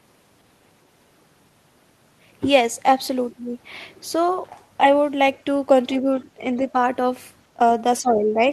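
At 6.2 to 6.25 s there is the other side's voice leaking through. The echo canceller likely left a small residue of the far-end signal that the talker's loudspeaker fed back into the microphone. What comes through is a brief, very faint scrap of a second voice, roughly 30 dB below the main speech.

At 6.57 to 6.75 s and again at 8.01 to 8.4 s there is speech suppressed in double talk. With both sides talking at once, the echo canceller likely could not tell the local talker from the loudspeaker echo, so it pulled the level down on both. In the first stretch the voice dips by a few decibels for only a few hundredths of a second, a slight momentary sag. The second is deeper, close to 10 dB, and lasts for most of that span. The voice drops back until the suppression lets go near 8.4 s.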